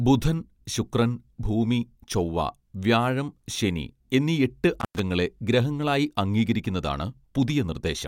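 At 4.80 s the speech drops out abruptly. This is an intermittent contact fault. A loose cable or plug breaks the signal path for an instant, then reconnects. Here the line stays open for about 0.10 s, within a disturbance lasting until 4.99 s. The gap is bracketed by crackle as the contact breaks and remakes. During the dropout, a faint hiss remains. Then the speech returns.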